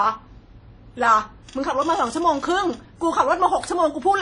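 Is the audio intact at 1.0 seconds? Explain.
No. At 1.0 s, as throughout, the speech shows WMA compression, likely at about 32 kbps: ringing, washy smear, hiss breathing with the signal, nothing above 10.1 kHz, unlike a clean low-pass.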